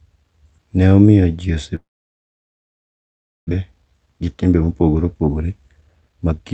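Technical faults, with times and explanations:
1.75–3.53 s, long network dropout: right after "omiyo ji" the audio stops arriving; the receiver stretches the last sound into a brief fading buzz, then about 1.6 s of near-silence follows. Roughly a second of the original audio never returns, likely from a network outage.
3.60–6.34 s, jitter buffer speed-up: with audio backed up after the gap, the receiver trims short pitch-period slices repeatedly to shed around half a second of delay, so the speech runs about 17% fast at unchanged pitch and sounds hurried.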